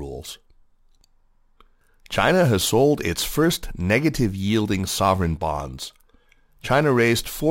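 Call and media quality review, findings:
Gritty, inharmonic fizz riding on the speech throughout, strongest on loud and bright syllables; crude rate conversion, consistent with a 48 kHz to 44.1 kHz change by nearest-sample dropping, no filter; periodic error roughly 25 dB below signal.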